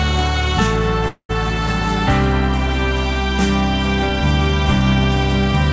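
Music passed through a call path whose content stops at 8 kHz, pointing to G.722. A call audio freeze runs from 1.08 to 1.31 s: a fading buzz or hiss, then about 90 ms of silence, likely from delayed packets emptying the jitter buffer. On a spectrogram this shows as a smeared band that fades out, followed by a blank column.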